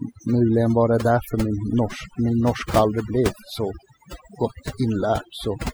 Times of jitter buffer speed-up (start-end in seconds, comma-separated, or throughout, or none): none